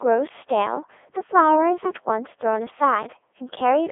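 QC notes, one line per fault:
Throughout, Codec 2 vocoder: the speech is rebuilt from a handful of parameters (pitch, voicing, energy and a coarse spectral envelope) rather than carried as a waveform. The decoder resynthesises it from sine waves, which makes the voice robotic and buzzy, with heavy codec damage. The audio sits in a narrow 300 Hz to 3.5 kHz line band with nothing above 3.7 kHz, and the quality fits Codec 2's 3.2 kbit/s mode.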